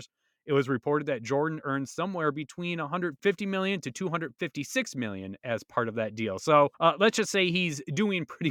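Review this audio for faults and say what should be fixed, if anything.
Nothing needs fixing: the speech signal shows no technical faults anywhere along its length.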